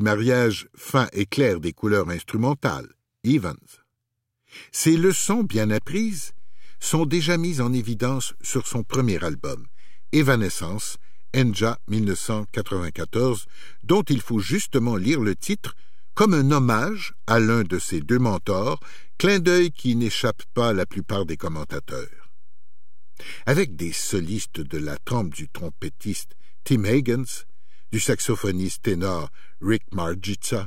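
At 4.98 s the speech carries a DC step: the waveform's zero line jumps by about -29 dBFS and stays offset until the end of the clip, as happens when a converter recalibrates or an input with a standing offset is switched into the path. It is heard as a single low thump at that moment while the speech continues unchanged. On the waveform the trace sits visibly displaced from centre from there on. A spectrogram shows a brief vertical smear at the step, then steady energy pinned at 0 Hz.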